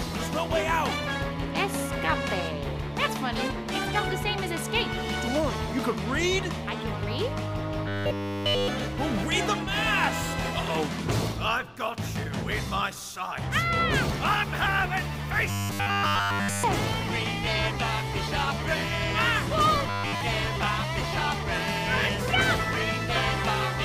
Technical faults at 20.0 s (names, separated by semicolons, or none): robotic sound from repeated short buffers